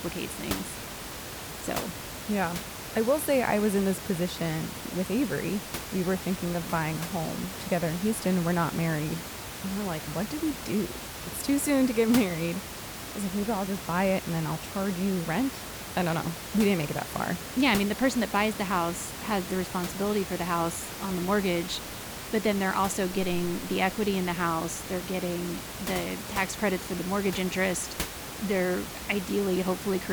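No technical faults are audible.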